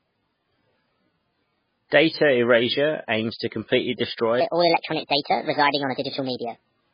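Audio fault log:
throughout: MP3 compression. The treble stops dead at 5 kHz, and nothing is heard above that edge. The damage is heavy. Weak frequency components flicker in and out between frames, so the speech sounds watery and swirly. S sounds turn into metallic chirps, and consonant attacks smear. The encoder was starved of bits, so it dropped the top band and the quieter detail. That fits a very low bitrate, near 16 kbps, as the likely cause.
4.41 to 6.93 s: section at the wrong speed. Right after "aims to completely", the speech suddenly runs 1.34 times too fast until the end of the clip. Pitch rises with the speed, by roughly five semitones, so the voice turns high and hurried. The change is abrupt rather than gradual. This section was likely played back against the wrong clock, so speed and pitch shifted together.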